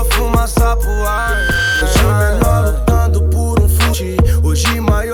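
From 0.82 s to 1.85 s a loudspeaker feedback squeal appears: a microphone is picking up its own loudspeaker, and the loop gain exceeds one at 1.6 kHz. That single tone swells over roughly 0.7 s until it sits about level with the programme, then stops.

At 3.93 s the sound jumps abruptly forward with a brief blip, a discontinuity in the programme rather than an added noise. This is likely a stream segment skipped: one segment failed to load, and playback carried on from the next.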